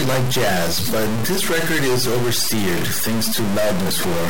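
A stuck bit runs through the whole speech clip, giving harsh, buzzy distortion on every syllable and a gritty noise floor in the pauses. The likely cause is one fairly high data bit held fixed, knocking about half the samples off by a step of roughly -15 dBFS.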